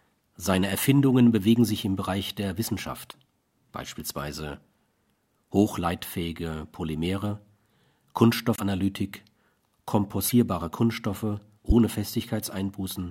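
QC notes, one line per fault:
3.10–3.14 s, 8.56–8.60 s, 10.28–10.33 s, 11.69–11.72 s: broken MP3 bit reservoir. The audio skips ahead with a garbled glitch of 30 to 45 ms, about one to two 26.1 ms frames. Likely cause: dropped frames left the next frame reading its borrowed reservoir data from another frame's bytes.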